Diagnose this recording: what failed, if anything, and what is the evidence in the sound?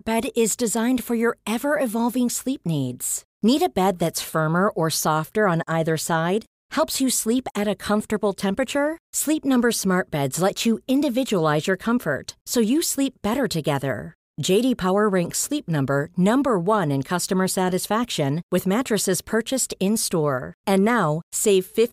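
Nothing failed: listening through the speech, there is no audible event at any stage of the chain to diagnose.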